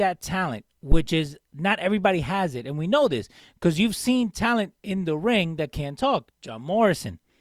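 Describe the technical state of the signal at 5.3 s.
At 5.3 s the signal is intact, with no audible technical fault at that point.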